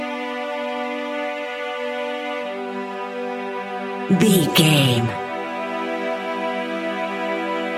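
No technical faults are audible anywhere in the recording.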